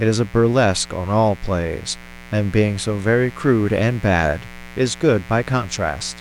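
From start to finish, a mains buzz sits under the speech. It is steady and raspy, not a smooth hum. The interference comes from a 60 Hz supply. A dimmer, a rectifier or a missing shield lets sharp switching spikes into the signal, twice in every cycle. Those spikes carry harmonics of 60 Hz well up into the kilohertz range. That is what gives the rasp. The buzz sits roughly 20 dB below the speech.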